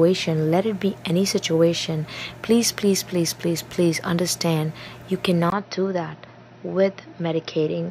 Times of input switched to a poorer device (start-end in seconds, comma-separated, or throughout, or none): 5.50-7.91